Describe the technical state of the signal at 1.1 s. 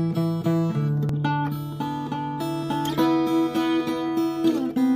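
At 1.09 s, compressed frames are skipped: about one 92.9 ms frame goes unplayed, so the audio jumps ahead roughly a tenth of a second. On a spectrogram there's an abrupt content discontinuity.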